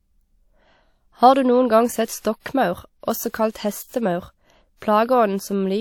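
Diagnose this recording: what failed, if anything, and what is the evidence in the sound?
The codec failed, leaving pre-echo. A brief hiss comes just before sharp onsets at 2.20 to 2.25 s, 3.51 to 3.55 s and 4.76 to 4.82 s. It lasts 52, 39 and 57 ms. Coding noise sized for each loud attack spreads back into the quiet before it.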